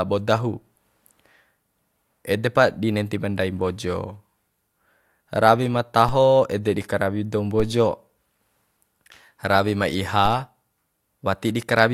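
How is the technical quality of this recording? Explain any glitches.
The recording has three DC steps, at 6.09 s (between "rawi ma" and "ede di karawi"), 7.60 s, and 10.26 s (just after "ma iha"). Each time, the waveform's zero line jumps by about -18 dBFS, as a recalibrating converter or an offset input would cause, then bleeds away through a 5 Hz high-pass. Each step is heard as a short low thump while the speech continues unchanged.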